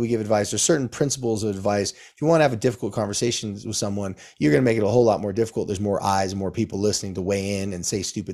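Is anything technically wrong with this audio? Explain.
No, nothing technically wrong can be heard in this speech recording. There is no fault to point to at any moment in it.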